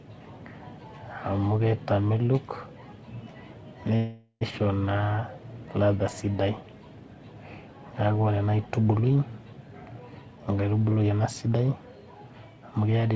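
From 3.96 to 4.43 s the speech stalls in a call audio freeze: the last sound is stretched into a fading buzz that ends in a brief silence. The likely cause is delayed packets draining the jitter buffer. Unlike a dropout, nothing is lost; the speech resumes where it stopped, just later.

From 11.02 to 11.50 s a jitter buffer speed-up plays the speech at about 108% speed, trimming roughly 50 ms of excess buffered audio in tiny pitch-period slices. The pitch stays the same, which sets it apart from a resampling error. Throughout, the G.722 call path passes nothing above 8 kHz.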